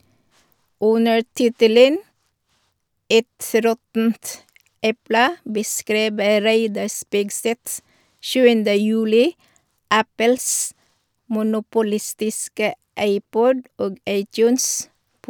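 No technical faults can be heard anywhere in this speech recording. There is nothing in the audio that needs a time or an explanation.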